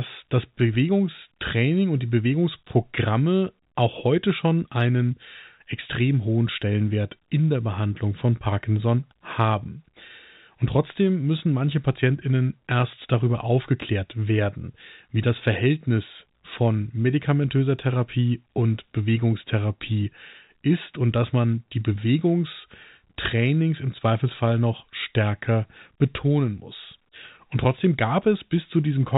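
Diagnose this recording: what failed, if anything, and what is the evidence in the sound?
Nothing failed: the speech carries the narrow telephone band of G.711 coding as expected, and no sound in the recording points to a fault.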